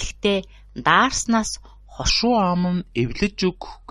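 At 2.10 s the speech drops into a section at the wrong speed that runs to the end of the clip. Playback here runs at 0.835 times the original rate, so everything slows and sinks in pitch together, by about three semitones. The change is abrupt rather than gradual, and the voice turns noticeably deeper and more drawn out. This is likely the result of that stretch being resampled or played against the wrong clock.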